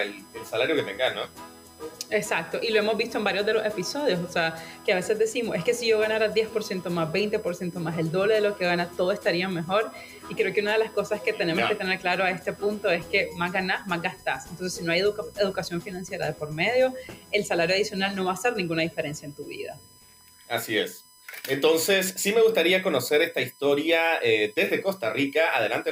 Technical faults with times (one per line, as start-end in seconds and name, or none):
0.00-25.92 USB whine